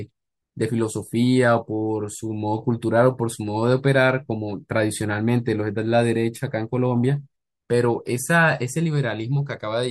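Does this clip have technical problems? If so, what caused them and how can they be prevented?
No, nothing in this speech recording stood out as a technical problem on listening, so there is nothing here that needs preventing.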